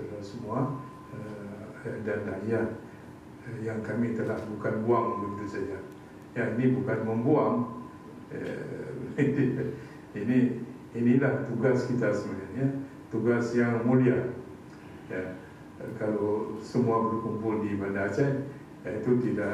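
No technical faults are audible.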